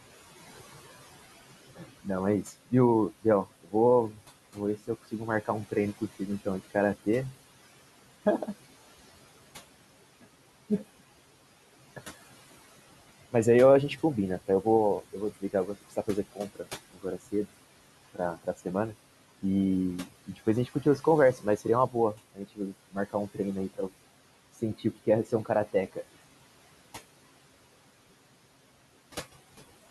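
Noise suppressor artifacts run through the whole recording. The room noise, about 19 dB below the speech, is pulled down by about 17 dB in pauses and rises again under each phrase. A spectrogram shows a pumping noise floor.

Speech cut by the noise suppressor appears at 1.76–7.33 s, 14.48–17.34 s, 20.05–23.9 s and 24.79–26.15 s. In these spans the suppressor mistook soft consonants and word endings for noise and dropped them by about 15 to 18 dB, so they sound swallowed. The waveform shows word tails cut short, and the spectrogram loses faint consonant energy.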